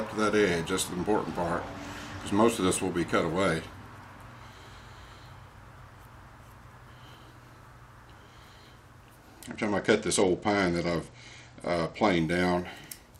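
From 9.46 to 12.18 s there is a Bluetooth SBC bit pool drop. The link appears to have become congested, and the sender cut the encoder's bit budget to keep the stream going. The sound fits a fall in bit pool from 31 to about 11, roughly 83 kbps. With so few bits, the upper sub-bands are starved and the remainder is quantised coarsely. The treble goes dull and a gritty noise appears for those 2.7 s, clearing when the rate recovers.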